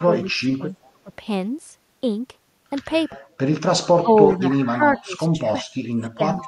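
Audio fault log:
0.05–0.67 s, 1.04–1.11 s, 4.02 s to end: speech suppressed in double talk. Speech dips by up to about 25 dB, likely from the echo canceller ducking during overlap, which shows as gapped, faded waveform and spectrogram energy.
0.83–0.90 s, 4.29–4.37 s: echo leak. Faint copies trail by 377 ms, about 35 and 25 dB below speech, likely residual loudspeaker echo, visible as weak repeated spectrogram patterns.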